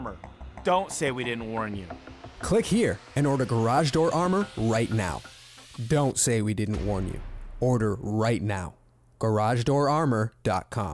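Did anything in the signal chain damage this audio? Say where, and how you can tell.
No, nothing in the signal chain damaged this audio.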